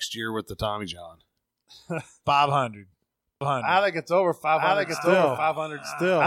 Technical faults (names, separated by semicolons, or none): doubled audio track